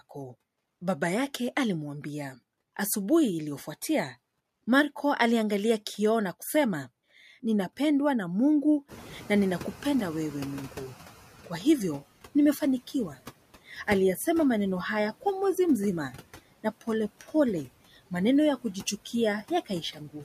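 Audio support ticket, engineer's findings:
Wi-Fi interference: steady ticking at about ten per second, whole clip, about 45 dB below speech. Tick spacing of 102.4 ms matches a Wi-Fi beacon. Nearby radio's RF is being rectified in the analogue audio path.

Noise suppressor artifacts: whole clip. Suppressor is cutting estimated steady noise by about 16 dB, band by band, frame by frame. Background drops away in gaps and comes back up under speech, giving a pumping floor.

Noise suppressor catching up: 8.88–11.17 s. Room noise (genuine, not a fault) jumps about 21 dB near 9 s. Suppressor's noise estimate lags, so it cuts only about 10 dB at first. Adapts over 2.29 s, settled by "kwa hivyo nimefanikiwa".

Speech cut by the noise suppressor: 19.66 s to end of clip. Suppressor is treating parts of speech as noise. Roughly 200 ms in total is pulled down, by up to about 16 dB. Affected speech sounds swallowed and faint.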